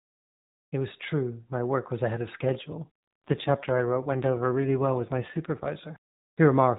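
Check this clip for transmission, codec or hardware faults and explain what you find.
One fault: an AMR rate drop from 2.38 to 5.71 s, just after "work was ahead of". A weak link forces the codec to spend bits on protection. Speech turns buzzier and more synthetic, which fits a fall from 12.2 to 5.9 kbps. On a spectrogram the 4 kHz ceiling holds, with no gap in the waveform, while the harmonics smear.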